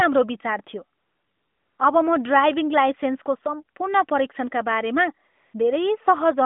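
From 0.98 to 1.78 s and again from 5.28 to 5.54 s, AMR comfort noise replaces the real background: the phone stopped sending speech frames, and the receiver substituted smooth, steady synthetic hiss. Unlike a dropout, there is no hard silence or glitch, just a flat noise bed switching in and out over narrowband audio.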